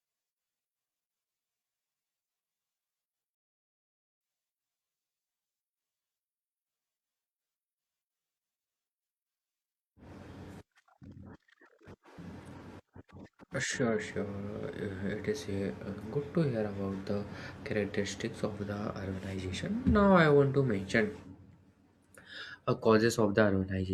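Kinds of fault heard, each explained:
Rebuffering stall: playback starves, halting the speech for 0.86 s at 3.35 s before it resumes where it stopped; unlike a dropout, nothing is lost.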